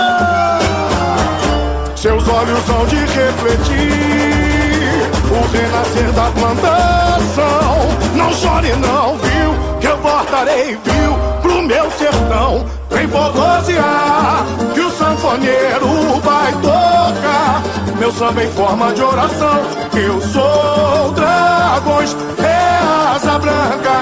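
No technical faults can be heard anywhere in the clip.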